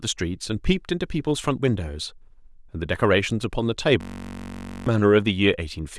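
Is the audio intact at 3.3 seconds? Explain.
Yes, at 3.3 seconds the speech is intact, with no dropout, click, distortion or other fault to be heard at that moment.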